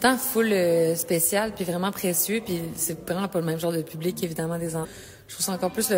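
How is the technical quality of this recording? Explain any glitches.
There is one glitch, a stream segment skipped, at 4.80 to 4.86 s. The sound jumps abruptly forward, with a brief blip of about 60 ms marking the join, so the material before and after the cut does not line up. This is likely a segment of the stream that failed to load. The player abandoned it and continued from the next segment, dropping that stretch of the programme and splicing the two ends together without any crossfade.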